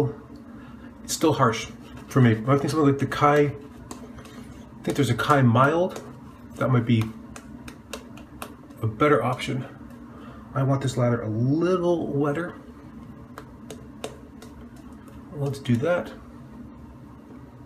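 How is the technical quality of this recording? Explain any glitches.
No glitches can be heard anywhere in the recording. There is nothing here that needs explaining.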